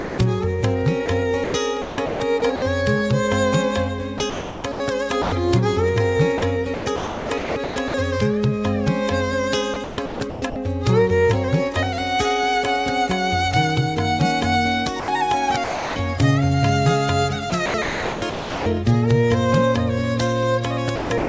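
Right at the start, from 0.0 to 0.18 s, the opening sound is swapped for a flat bed of steady noise. That's sound dropped by the voice detector: the sender's detector most likely hadn't triggered yet and heard the first 170 ms or so as background. So it sent nothing, and the receiver filled the gap with comfort noise until real sound came through.

After that the same mechanism keeps misfiring, and you get sound chopped by the voice detector. It happens at 1.06–2.62 s (about 0.5 s of it replaced), 4.18–5.32 s (0.54 s), 6.38–7.94 s (0.86 s), 9.74–10.56 s (0.48 s), 15.0–15.96 s (0.4 s), 17.5–18.66 s (0.86 s), and 20.96 s through to the end (0.25 s). In each stretch the detector is likely flipping between sending and muting, so quieter bits and edges drop out to synthetic noise. The result is choppy sound. Underneath all this, the call path tops out at 8 kHz, which fits a wideband codec like G.722.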